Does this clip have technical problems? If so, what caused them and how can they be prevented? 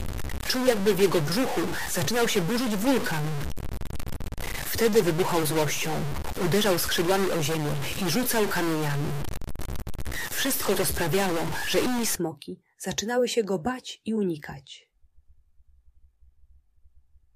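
Yes. From 0 to 12.15 s there is harsh, buzzy distortion with noise filling quiet gaps, likely a stuck bit throwing about half the samples off by roughly -25 dBFS. Testing converter wiring and data lines with a slow ramp signal catches a stuck bit before recording.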